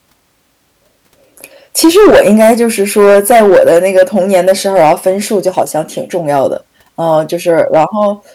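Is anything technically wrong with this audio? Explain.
Yes. Hard clipping runs throughout: the speech is driven about 14 dB past full scale, so roughly 7 percent of samples are flattened, adding harsh fuzz on every loud syllable.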